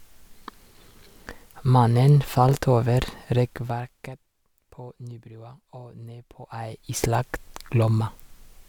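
No technical faults occur in this speech clip, and its smooth level changes are simply fader-style adjustments.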